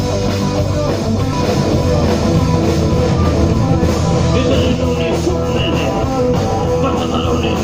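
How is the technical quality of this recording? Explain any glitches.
A doubled audio track runs from 1.33 s to 4.75 s. Over that span a second, full-band copy of the sound trails the original by roughly one second, at about the same loudness. It carries no decay or added room colour, and it cuts in and drops out abruptly at those edges. The likely cause is the signal being captured again through a slower path, or an edit leaving two copies out of alignment.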